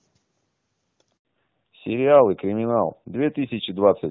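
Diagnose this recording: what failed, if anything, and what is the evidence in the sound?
At the network stage a handover gap opens from 1.17 to 1.25 s. The call is passed between networks and no speech frames arrive for about 80 ms, so the sound dies away almost at once, stays silent, and whatever was said there is lost.

From 1.25 s to the end, the codec stage shows a fallback to narrowband. Before the switch the audio has clean HD Voice bandwidth, consistent with high-rate AMR-WB. Afterwards nothing is present above 4 kHz, and the dull, rougher tone fits low-rate AMR-NB.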